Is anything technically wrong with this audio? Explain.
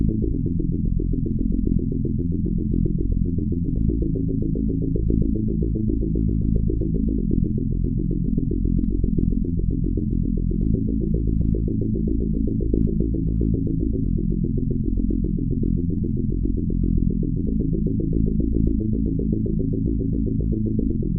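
Yes. De-emphasis applied wrongly, from 16.95 s to the end at 21.19 s: a treble-cutting filter meant to undo pre-emphasis acts on audio that never had any, or is applied a second time, sloping the response smoothly down to about 13 dB lower at 10 kHz than at 1 kHz, so the sound turns dull and muffled.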